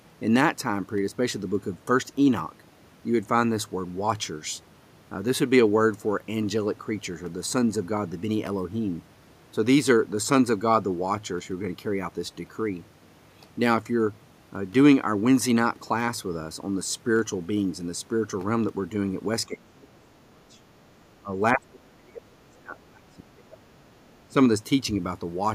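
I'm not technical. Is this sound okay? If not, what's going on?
No. The voice dips or drops out from 19.47 to 20.64 s, 21.20 to 21.33 s, 21.53 to 23.92 s and 24.29 to 24.36 s. This is speech suppressed in double talk: the echo canceller likely turned it down while both sides spoke at once.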